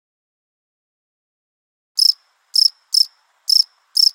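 At 3.02 s, damaged data in a compressed stream corrupts a short run of the encoded frames, so the decoder misreads them and loses sync until it finds a valid frame header again. The result is a brief, sharp blip in the sound.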